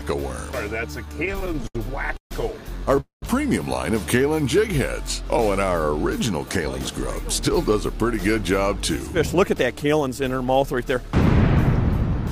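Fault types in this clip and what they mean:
Repeated stalls (stutter): From 0.91 to 2.32 s the sound hitches fifteen times, each stall held up by a continuation of the last sound, the longest 140 ms. Packets kept arriving late, emptying the jitter buffer repeatedly. About 362 ms was filled and nothing is lost.
Call audio freeze: At 3.00 s the sound hangs, its last moment stretched into a fading tail and then 120 ms of silence before resuming at 3.23 s. Nothing is skipped, but 219 ms is inserted. The likely cause is packets held up in transit, draining the jitter buffer.
Jitter buffer slow-down: Between 4.18 and 4.58 s the sound drags to about 91% speed with unchanged pitch, sounds drawn out. The receiver repeated single pitch periods or bits of pause, adding 44 ms, to rebuild a depleted buffer reserve.
Jitter buffer speed-up: From 6.61 to 11.81 s the sound runs slightly faster, at 104% speed with the pitch unchanged. 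The buffer held more than its target, so the receiver trimmed short pitch-period pieces, removing about a fifth of a second in total.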